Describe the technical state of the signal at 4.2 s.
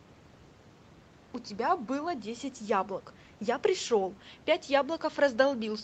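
At 4.2 s the speech is intact, with no dropout, click, distortion or other fault; the only things audible are the call path's normal limit of nothing above 8 kHz and faint room noise about 29 dB below the speech.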